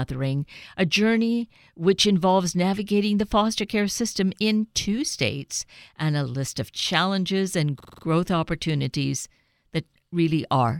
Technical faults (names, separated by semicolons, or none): system hang loop